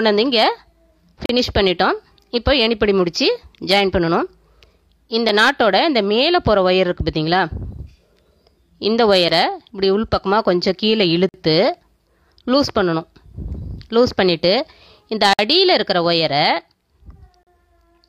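Hard-edged silences cut the sound at 1.26–1.29, 5.29, 9.29, 11.29–11.34, 15.33–15.39 and 17.43–17.47 s. Each is a gap between stream segments. Two-second segments have timestamps that fail to meet. Silence fills each hole, lasting 4 to 55 ms.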